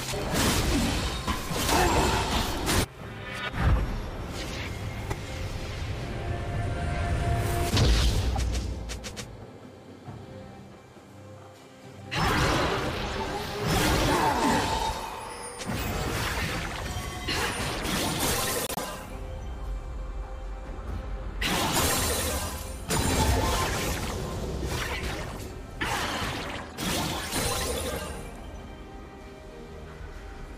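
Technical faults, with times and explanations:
5.10–5.14, 8.31–8.38, 11.91–12.01, 18.67–18.85, 21.70–21.79, 25.36–25.42 and 26.69–26.75 s: corrupt frame decoded. A few consecutive damaged frames each time were played with wrong gains and misread codes, producing brief chirps and noise bursts that peak from about -40 dBFS up to about -10 dBFS, loudest near 21.7 s. These add spurious energy, whereas concealed packet loss would leave a gap or a smeared repeat.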